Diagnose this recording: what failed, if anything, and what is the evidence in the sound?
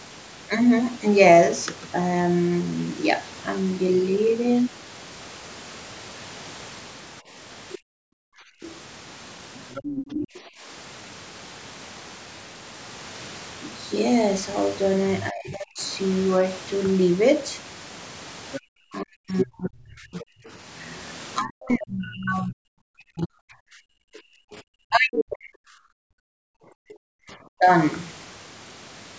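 Other side's voice leaking through, 7.69–10.38 s and 18.52–20.49 s, about 15 and 10 dB below speech: likely residual loudspeaker echo the call-processing echo canceller left in.

Background gated by the echo canceller at 7.78–8.62, 10.41–10.63 and 23.88–24.54 s: the room sound drops up to about 40 dB as the canceller clamps the microphone.

Speech suppressed in double talk at 15.3–15.81 s and through 18.89–27.72 s: the talker dips as much as 40 dB, likely because the canceller attenuated both overlapping voices.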